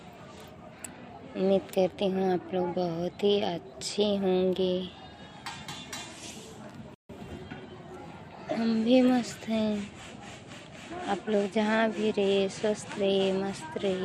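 At 6.94 s the audio halts in a rebuffering stall: the player has run through its downloaded data and waits for more before carrying on. Silence lasts until 7.09 s, adding 150 ms. The sound then picks up exactly where it left off, with nothing skipped. On a waveform this shows as a flat gap between otherwise continuous material. A spectrogram shows a clean vertical blank band across all frequencies.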